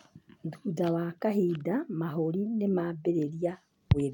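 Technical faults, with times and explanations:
No technical faults detected anywhere in the speech recording.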